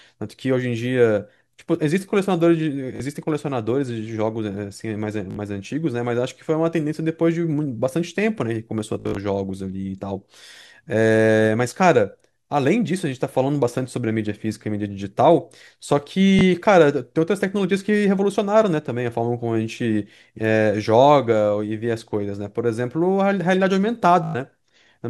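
Short buzzing stutters interrupt the speech at 2.96–3.00 s, 5.31–5.36 s, 8.94–9.17 s (scattered), 16.39 s and 24.24–24.35 s. This is Bluetooth stutter: late or lost packets made the receiver replay its last buffer for 19 to 149 ms, and the speech then skips ahead.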